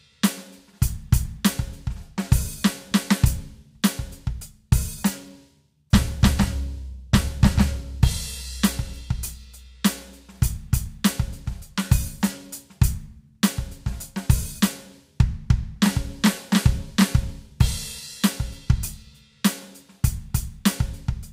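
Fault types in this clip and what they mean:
There are no fault types in this music clip.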